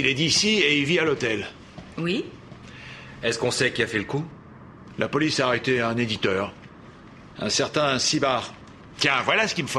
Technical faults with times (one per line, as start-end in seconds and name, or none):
none